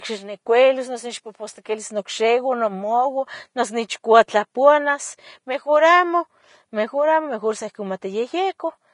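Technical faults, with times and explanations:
Throughout, Vorbis compression: the speech was likely encoded with Vorbis at a low bitrate, the damage fitting roughly 31 kbps. Nothing survives above 10.5 kHz, and the remaining treble is so coarsely quantised that detail turns to plainly audible hiss and grain, blurring consonant attacks.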